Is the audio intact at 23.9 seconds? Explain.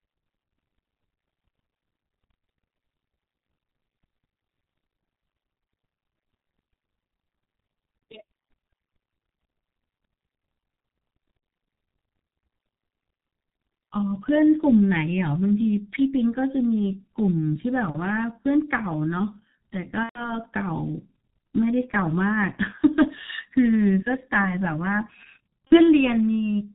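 No. At 23.9 s the speech carries the G.723.1 codec damage that runs through the whole clip. This telephony coder rebuilds speech from a compact voice model sent in 30 ms frames and keeps nothing above 4 kHz, so high detail is simply gone. The heavy loss here fits a rate near 6 kbit/s. The speech sounds muffled and hoarse, and consonants smear into one another because the model can't follow fast changes.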